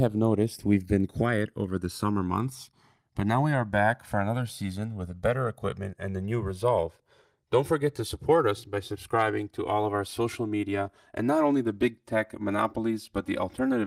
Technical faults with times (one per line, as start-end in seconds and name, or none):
0.00-13.87 channels drifting apart